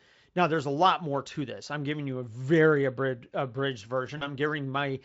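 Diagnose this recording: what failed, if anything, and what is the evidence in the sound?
The network stage dropped out briefly. Around 4.17 s there's a short stretch where the sound smears into a buzzy tone or a coloured noise that fades before the signal recovers near 4.31 s. That's VoIP packet loss concealed by the speech codec: roughly 40 ms of audio never arrived, which fits two lost 20 ms frames, so the decoder kept extrapolating from its last pitch and filter state while ramping the gain down. The Speex coding itself sounds clean or at most faintly coloured here.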